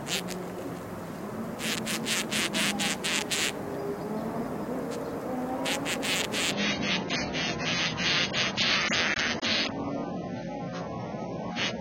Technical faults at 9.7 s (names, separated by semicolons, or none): adaptive stream at a lower bitrate